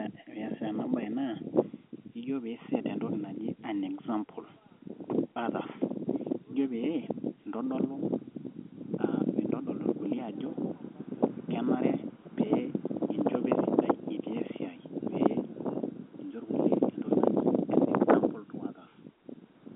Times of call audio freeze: none

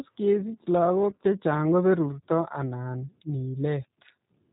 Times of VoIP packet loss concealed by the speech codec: 1.11-1.24

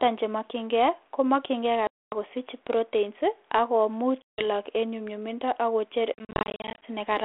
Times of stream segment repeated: none

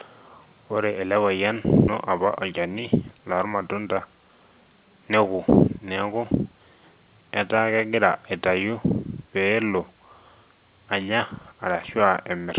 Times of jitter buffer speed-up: 2.25-4.06

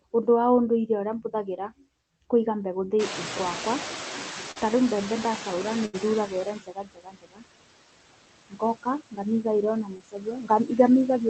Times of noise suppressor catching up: 2.99-6.57

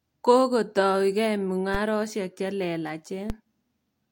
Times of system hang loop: none

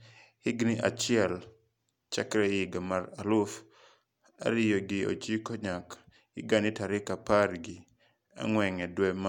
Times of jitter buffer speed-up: none

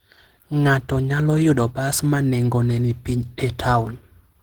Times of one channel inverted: none

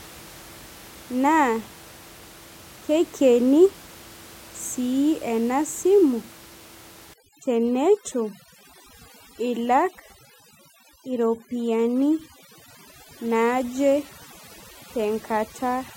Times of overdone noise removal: 7.14-15.96

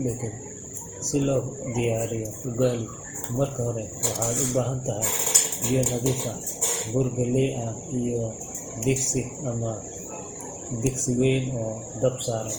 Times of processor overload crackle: none

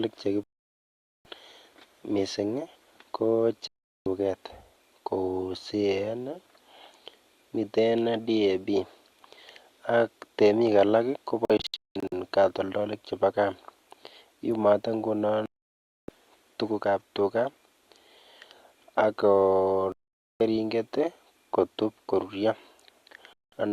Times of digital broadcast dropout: 0.43-1.26, 3.68-4.06, 11.45-12.13, 15.46-16.09, 19.92-20.41, 23.33-23.53

